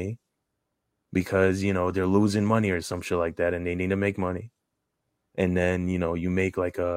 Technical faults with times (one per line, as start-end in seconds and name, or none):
none